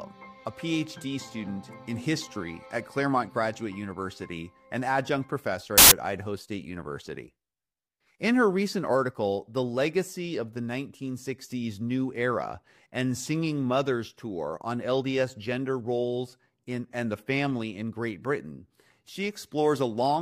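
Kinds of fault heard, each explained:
File tags played as audio: at 5.78 s, lasting about 0.14 s, the decoder has run straight into a block of file metadata and treated it as samples. The block here is compressed picture data, most likely an embedded cover image, so the bytes come out essentially random and you get a short burst of very loud white noise. It cuts in and out with hard edges, with nothing musical about it.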